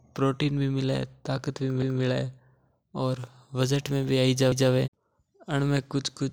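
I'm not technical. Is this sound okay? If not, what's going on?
No. The speech has overlapping chunks: it was handled in pieces about 2.5 s long, each starting slightly early, so about 200 ms plays twice at each join. You hear a short stutter at 1.82–2.02 s and again at 4.52–4.72 s.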